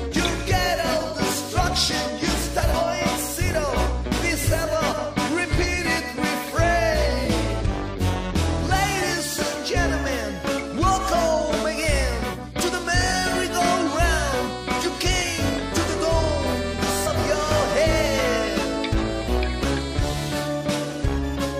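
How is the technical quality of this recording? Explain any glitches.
Two brief glitches, at 2.73 s and 17.06 s, come from damaged data in a compressed stream. Corrupted bytes make the decoder misread a frame and resynchronise, giving a short disruption of about 18 ms. On a spectrogram each shows as a thin broadband vertical smear; the waveform shows a tiny discontinuity.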